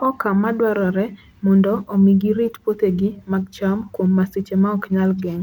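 Nothing is technically wrong with this speech recording.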